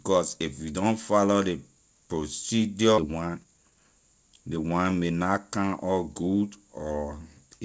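At 2.98 s a skip ahead drops about a second of speech, splicing the two sides together with no gap. The waveform shows an abrupt seam where the spectrogram pattern changes without transition. From 3.11 to 5.11 s a jitter buffer speed-up trims short pitch-period pieces to shed about half a second. It plays speech 127% fast at unchanged pitch, sounding hurried, with compressed syllable spacing in the spectrogram, which is empty above 8 kHz.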